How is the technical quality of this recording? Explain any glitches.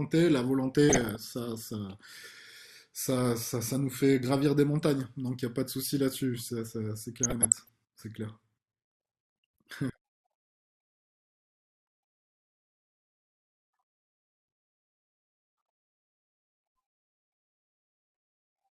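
Two bursts of DAB burbling spoil the speech, from 0.89 to 1.16 s and from 7.16 to 7.69 s. Weak reception let bit errors through into the MP2 data. Corrupted samples add short blips of noise in single sub-bands, and corrupted scale factors make sub-bands jump in level for up to a frame.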